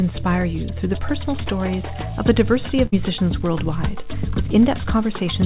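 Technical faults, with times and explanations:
1.08 s to the end: computer activity noise. A buzzy, ticking layer comes in and stays for the rest of the clip, pulsing at roughly 70 times a second and sitting about 35 dB below the sound. It follows the machine, not the audio: processor, graphics or mouse load pulls current through the shared ground, and the audio circuit picks that up as a rasping buzz that keeps going even when the sound itself changes.
2.86 s to 2.94 s: burst of packet loss. Audio didn't arrive in time, so the receiver covered roughly 61 ms by stretching out the last thing it had and fading it down, which gives a brief held buzz or dying hiss. Then it skips ahead, and about 60 ms of the sound is simply gone. The narrow, 4 kHz-topped call bandwidth carries right through the patch.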